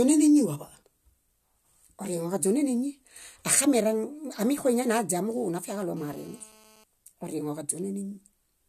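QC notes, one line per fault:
5.97–6.84 s, GSM phone buzz: a hard, raspy 217 Hz buzz full of harmonics sits under the speech, holding steady at about 29 dB down. A nearby 2G phone on a call bursts its transmitter, and the audio circuitry rectifies those pulses.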